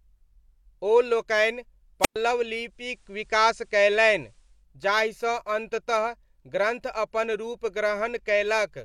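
Right after "ओ लोकनि", at 2.01 s, there's a wireless microphone squelch dropout. The transmitter's FM signal sags enough that the receiver's squelch slams shut, so you get a quick swell of hiss and then a hole of near silence lasting about 110 ms before the speech snaps back at 2.16 s. It's short.

Not long after, from 2.60 s to 4.67 s, the audio goes through digital radio blending to analogue. The receiver loses the digital stream and cross-fades over about 390 ms to the station's FM broadcast, then fades back at the far end. A low hiss creeps in, somewhere around 45 dB down, and the level shifts by about 2 dB.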